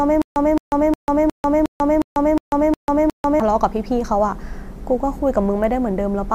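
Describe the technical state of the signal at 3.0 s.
At 3.0 s the signal is inside a stutter with silent gaps that is already under way when the clip begins and runs to 3.40 s. A speech fragment of about 217 ms plays, then drops to digital silence for about 143 ms, repeating every 360 ms, nine times in all. The likely cause is a stalled stream replaying its last buffered fragment at each retry. On a waveform this shows as identical blocks separated by flat, near-silent stretches, and on a spectrogram as a repeated pattern broken by blank vertical columns.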